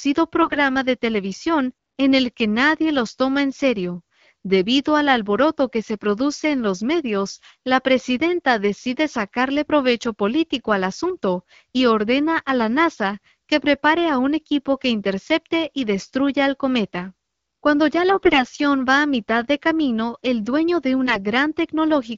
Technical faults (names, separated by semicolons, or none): AMR bit errors